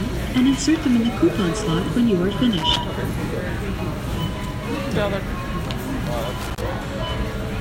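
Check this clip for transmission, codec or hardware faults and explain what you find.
Two short hardware faults turn up, both loose connector crackle. From 2.51 to 2.77 s and again from 6.41 to 6.61 s, a worn contact keeps making and breaking, chopping the signal into an irregular scratchy burst; a waveform shows jagged dropouts and spikes, a spectrogram scattered broadband vertical streaks.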